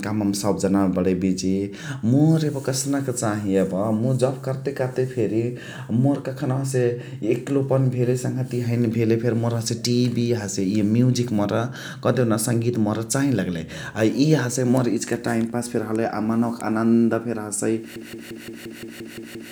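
Speech, ending in a broken-record loop from 17.96 s to the end: a 174 ms fragment repeats nine times, likely from a stalled player, showing as identical waveform blocks.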